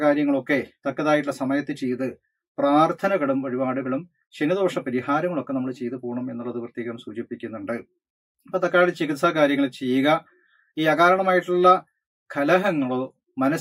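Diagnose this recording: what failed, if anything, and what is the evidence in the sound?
Nothing failed in this recording, and no stage of the signal chain leaves any audible evidence of a fault. Listening across the whole clip turns up no event that would point to a problem anywhere along the path.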